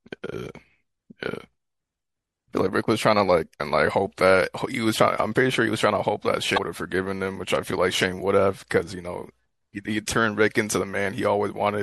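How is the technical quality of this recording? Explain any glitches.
The quality's compromised: there's audible compression damage throughout, plus two short glitches in the speech.

The whole clip has a watery, swirly character with dull treble and metallic chirps on s sounds, likely from MP3 compression at a bitrate around 64 kbps. Squeezed that hard, the encoder chops off the top end and lets weak frequency detail flicker in and out between frames.

At 3.57 to 3.60 s and again at 6.54 to 6.58 s there's a brief glitch. That's damaged data in the compressed stream: corrupted bytes throw the decoder off, so it garbles those frames before locking back onto the next valid header.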